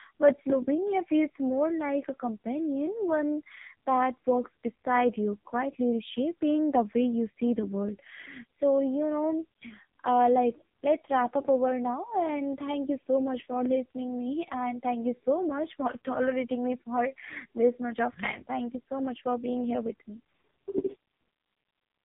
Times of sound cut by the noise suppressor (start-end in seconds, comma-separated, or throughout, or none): none